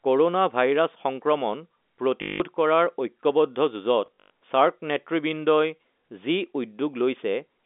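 At 2.22–2.40 s and 4.06–4.30 s, packet loss with last packet repeated loops stale audio, so the gaps buzz at about 50 Hz instead of falling silent.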